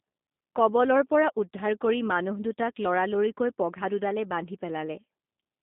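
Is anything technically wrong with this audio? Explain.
Yes. The speech runs through a G.729 codec for its whole length. The sound points to 8 kbit/s coding: each 10 ms frame is rebuilt from a vocal tract filter, a pitch predictor and a few pulses. Nothing passes above 3.8 kHz, leaving a 200 Hz to 3.7 kHz band. The voice sounds plainly rough and synthetic.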